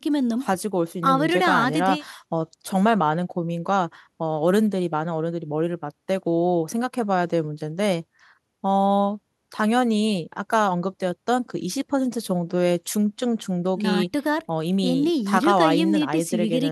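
No faults detected anywhere in the speech recording.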